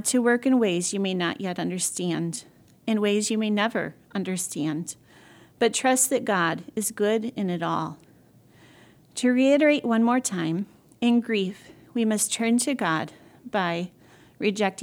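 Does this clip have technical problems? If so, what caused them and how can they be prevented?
No, the speech signal shows no technical faults, so there is nothing here that needs a cause or a preventive fix.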